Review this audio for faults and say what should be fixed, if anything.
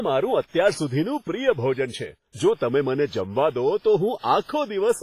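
Low-bitrate WMA compression, likely at around 24 kbps, runs through the whole speech clip. The transform codec quantises coarsely over long blocks, so the sound rings and turns washy, hiss breathes with the signal, and nothing remains above 15.4 kHz. Keep an uncompressed or high-bitrate master and encode once at a higher bitrate.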